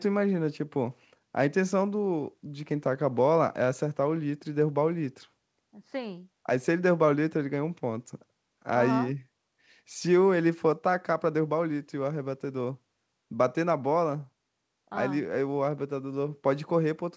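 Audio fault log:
Listening to this speech clip, nothing stood out as a fault.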